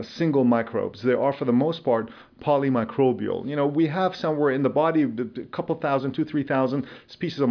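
No technical faults can be heard anywhere in the recording.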